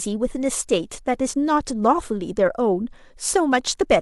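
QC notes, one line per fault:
No technical faults are present in the signal.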